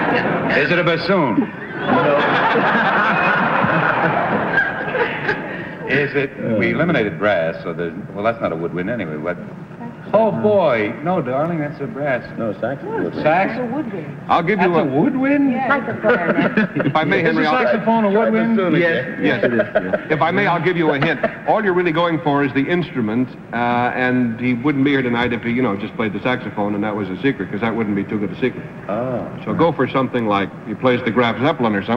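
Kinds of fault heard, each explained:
No technical fault can be heard anywhere in the recording, which holds steady throughout with no audible dropouts, distortion, glitches or level disturbances.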